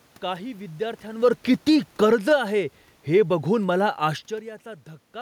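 From 1.09 s to 2.46 s the speech and the room noise behind it sink together by about 10 dB. That shared drop marks automatic gain falling: the gain control judged the input too loud, perhaps after the talker moved around 1 s, and eased its gain down.

From 2.37 s to 2.86 s, just before "हे बघून मला", voice and background swell back together by about 6 dB. This is automatic gain rising: the control, now finding the input too quiet, lifted its gain over that half second.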